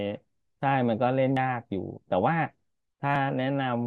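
A short speech recording with two abrupt jumps. At 1.37 s the sound lurches forward, missing roughly a tenth of a second, and at 3.16 s a smaller skip of around 40 ms does the same. Neither has a gap of silence; the two sides just butt together. That's likely a dropped buffer (overrun), where the capture side didn't fetch its samples before the hardware overwrote them.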